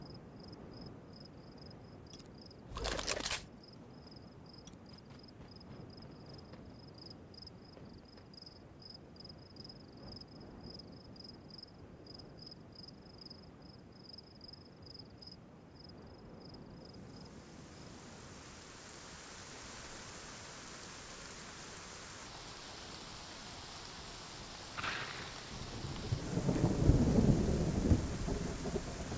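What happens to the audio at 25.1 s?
At that point the audio is being played back at the wrong sample rate, from 22.26 to 26.21 s, with no rate conversion. The slowdown fits material recorded near 22 kHz being played at 16 kHz. Everything runs at 0.726 times normal speed and drops about 5.5 semitones, so the sound turns low, heavy and dragging.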